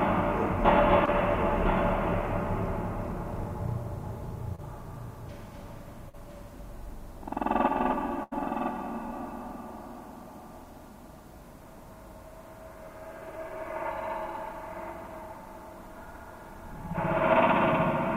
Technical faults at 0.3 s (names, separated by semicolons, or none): none